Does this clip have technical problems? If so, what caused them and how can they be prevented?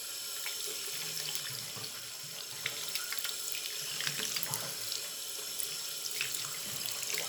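Yes: breaks at 0.4, 2.52, 4.3 and 5.88 s where the sound jumps ahead, likely dropped buffers (overruns), each losing roughly 20 to 70 ms, seen as waveform discontinuities and thin vertical spectrogram lines. Prevent this with larger capture buffers and a higher-priority recording thread.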